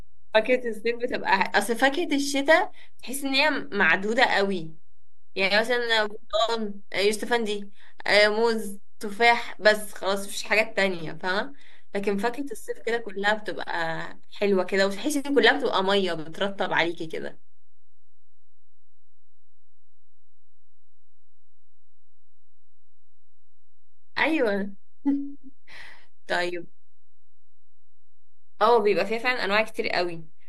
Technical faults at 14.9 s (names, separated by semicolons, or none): DC offset